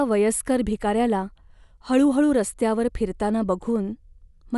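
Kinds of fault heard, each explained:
No technical fault can be heard anywhere in this speech recording, which holds steady from beginning to end.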